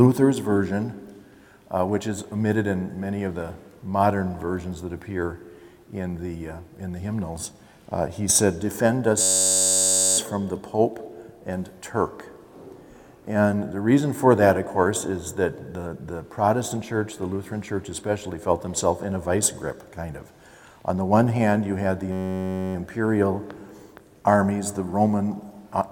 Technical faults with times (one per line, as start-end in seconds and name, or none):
9.22-10.18 system hang loop
22.12-22.75 system hang loop